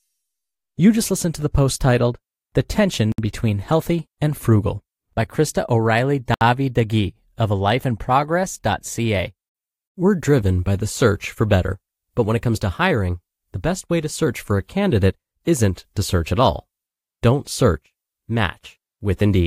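Two gaps at joins of encoded pieces, at 3.12 s (62 ms) and 6.34 s (70 ms), break the speech where separately encoded pieces were joined untrimmed, leaving encoder delay and padding as smeared silences.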